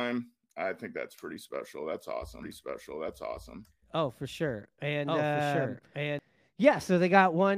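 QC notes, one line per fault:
2.43 to 6.19 s, doubled audio track: a second copy of the speech trails the original by about a second at roughly equal level, dry and full-band, switching in and out abruptly, likely a slower capture path mixing the same audio in twice.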